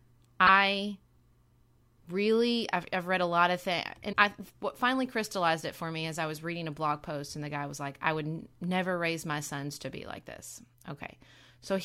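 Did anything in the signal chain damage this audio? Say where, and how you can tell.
Yes. A broken MP3 bit reservoir, most likely from frames cut out of the encoded stream at the codec or storage stage, shows up at 0.46–0.49 s and again at 4.12–4.15 s, between "a lot of things" and "I what finally crystallized". Each event is short, lasting roughly one frame of about 26 ms. The speech also jumps ahead there. Once frames are gone, the next frame reaches back into the reservoir for its borrowed bits and decodes bytes that belong to a different frame.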